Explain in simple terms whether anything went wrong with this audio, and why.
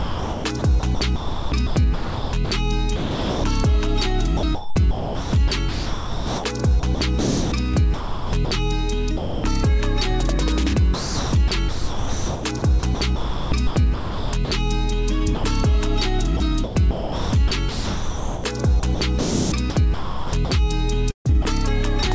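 The sender's voice detector likely kept switching transmission on and off, causing sound chopped by the voice detector at 0.0–3.44, 4.37–8.51, 10.94–14.51, 16.37–20.51 and 21.11–21.45 s, where parts of the sound become synthetic comfort noise. Sound dropped by the voice detector also occurs, likely because quiet sound was mistaken for background: 9.17–9.44 s and 15.35–15.44 s become steady noise until the sound returns.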